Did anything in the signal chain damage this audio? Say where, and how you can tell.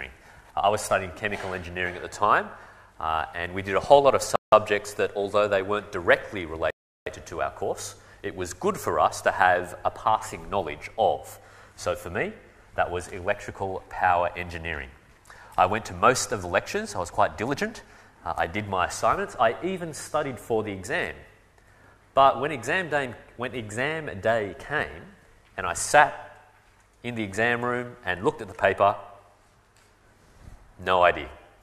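Yes: two dropouts to dead silence, at 4.36 to 4.52 s (167 ms) and 6.70 to 7.06 s (361 ms), with the sound picking up again after each. That's likely a Bluetooth stall on the wireless link: delayed packets drained the headphones' buffer until resends arrived.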